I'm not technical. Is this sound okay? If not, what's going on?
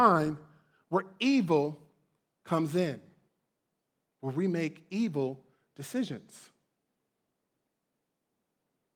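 Yes, nothing wrong here.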